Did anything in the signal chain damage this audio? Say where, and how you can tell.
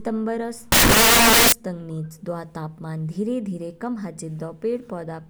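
Yes. From 0.72 to 1.52 s the speech turns into loud, harsh broadband noise. This is samples built from the wrong bytes at the sample-format conversion stage: misassembled bytes let the rapidly changing low bits dominate each sample.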